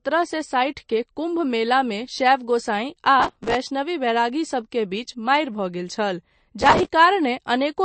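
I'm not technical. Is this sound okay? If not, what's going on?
No. The speech sounds plainly watery and swirly throughout, with nothing above 8.3 kHz, so it's dull on top. That's MP3 compression, likely from too few bits to spend.

There's also processor overload crackle: gritty tearing from 3.2 to 3.55 s, just before "बैरागीसभ के बीच मारि", and again from 6.60 to 6.87 s. An overloaded computer kept missing tiny audio deadlines and replayed bits of old sound.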